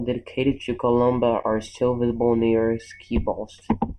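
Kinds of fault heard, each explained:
Channel delay (comb filtering): one channel of the speech runs late by a fraction of a millisecond, around 0.4 ms, and summing the two to mono cancels shared content at evenly spaced frequencies, starting around 1.5 kHz. The voice sounds hollow and phasey throughout. On a spectrogram, dark horizontal bands sit at fixed frequencies for the whole clip, repeating up the spectrum. The waveform shows no obvious damage.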